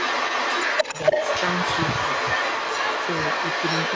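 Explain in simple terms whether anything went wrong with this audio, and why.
Throughout the recording, from the first moment to the last, the speech is followed about 0.29 seconds later by a second copy at roughly the same loudness, so it sounds doubled. This is an echo leak. The likely cause is that someone on the call was using a loudspeaker, and their echo canceller failed to remove what their microphone picked up, so the voice was sent back. The call's microphone processing, which cuts everything above 8 kHz, is working as it should.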